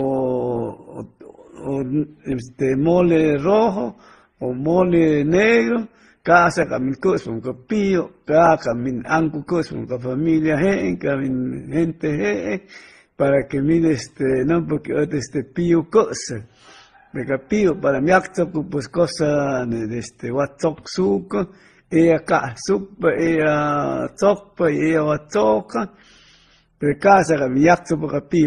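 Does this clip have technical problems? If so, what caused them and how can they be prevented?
Yes. Throughout the speech there's nothing above about 11.7 kHz, plus layered coding artefacts from different codecs heard together. It's likely transcoding between lossy codecs, and it sounds like low-bitrate MP3, then AAC, then Opus, each re-encoding the last one's damage. Keep a lossless master and encode only once.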